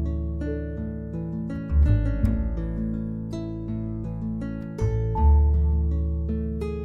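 No technical faults can be heard anywhere in this clip.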